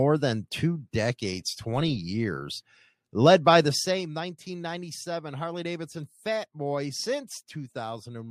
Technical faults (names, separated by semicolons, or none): zipper noise